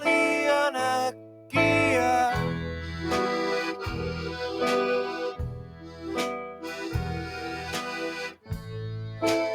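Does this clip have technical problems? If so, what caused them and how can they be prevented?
Yes. A noise suppressor was applied to music or sounds throughout, treating steady, sustained content as noise and pumping the level by around 10 dB. To prevent this, bypass speech-oriented noise suppression whenever the source is music or ambient sound.

Sound cut by the noise suppressor at 1.11–1.53 s, 5.60–6.07 s, 6.46–6.73 s and 8.29–8.51 s, where held or decaying parts sink by about 8 to 9 dB. Lowering the suppressor's strength or disabling it for non-speech material would keep these passages intact.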